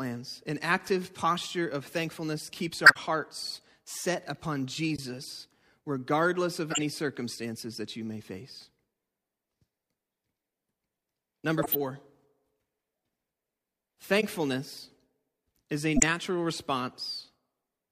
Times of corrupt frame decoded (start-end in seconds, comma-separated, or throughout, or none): 2.84-2.97, 4.95-4.99, 6.70-6.82, 11.58-11.76, 14.20-14.24, 15.96-16.03